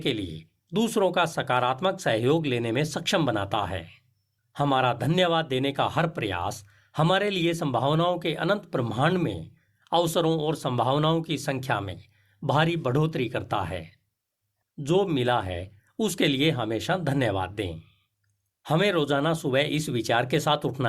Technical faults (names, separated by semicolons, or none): none